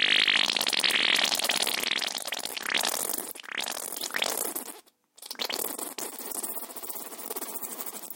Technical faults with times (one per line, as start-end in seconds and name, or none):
0.83-4.21 doubled audio track